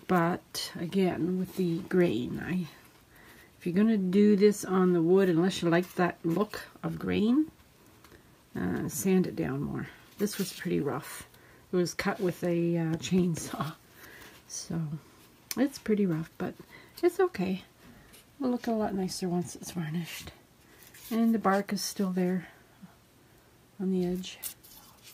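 No technical faults can be heard at any point in the clip.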